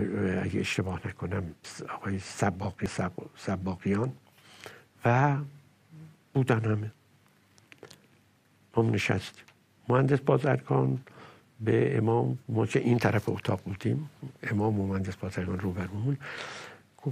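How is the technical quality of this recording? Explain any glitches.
Two brief glitches mar the recording, at 2.86 s and 4.72 s, both caused by damaged data in a compressed stream. Corrupted bytes make the decoder misread frames and hunt for the next valid header, producing a short chirp or squawk, seen as a thin broadband vertical streak or a waveform discontinuity.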